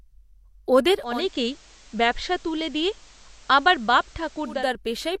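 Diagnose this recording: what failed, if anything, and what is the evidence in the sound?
From 0.97 s to 4.74 s the speech takes on steady hiss well below the signal, at unchanged level, with roughly 330 ms cross-fades each way. This is digital radio blending to analogue at the reception stage: the receiver lost the digital stream and fell back to the station's FM broadcast.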